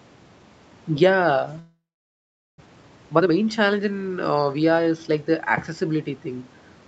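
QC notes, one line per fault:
1.59–2.62 s, long network dropout: Audio likely stopped arriving for about a second. The receiver stretched the last sound into a fading buzz, then left near-silence for most of the gap, and the sound resumes with roughly 0.6 s of material missing.
2.66–4.96 s, jitter buffer speed-up: After the gap, the buffer held a few tenths of a second more audio than its target. The receiver repeatedly trimmed short pitch-period pieces, removing roughly 0.4 s. The sound therefore runs at 117% speed at unchanged pitch and comes across as hurried.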